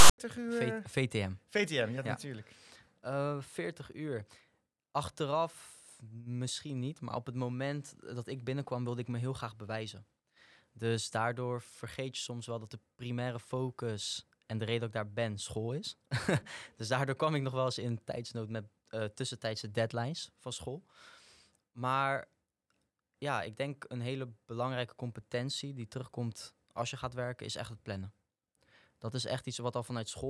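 From 0.00 to 0.18 s, file tags played as audio: a block of text metadata and zero padding was read as samples, giving a hard-edged, lopsided rasp and then silence.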